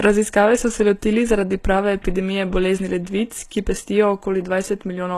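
Throughout the speech the treble sounds bright but synthetic: s sounds come out gritty and lispy, and nothing reaches past 12.3 kHz. This is likely HE-AAC compression, at a level that fits a 16 kbps stream. It differs from a plain low-pass filter because the upper band is rebuilt from copied lower bands, so it stays bright but its harmonics don't line up.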